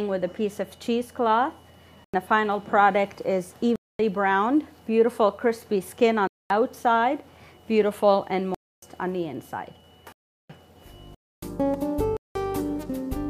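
Abrupt holes cut the audio at 2.04, 3.76, 6.27, 8.55, 10.12, 11.15 and 12.17 s, lasting from 0.09 to 0.37 s: blocks of digital silence where the output buffer likely went unfilled, with some lengths that fit whole buffers of 4096 to 16384 samples.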